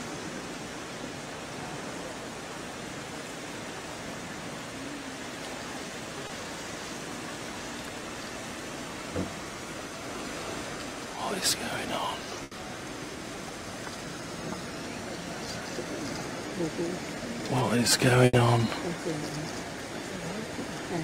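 At 6.27 to 6.31 s there is a short concealed packet loss. About 20 ms of audio never arrived, and the decoder bridged the hole by extending the preceding sound and then blending back in. It comes across as a momentary smear or wobble, which sets it apart from the longer gaps later.

At 12.43 to 12.53 s and again at 18.25 to 18.35 s, a burst of packet loss replaces about 80 ms each time. The receiver keeps the last sound going while fading it, heard as a held buzz or dying hiss, and then the audio resumes further along with that stretch missing.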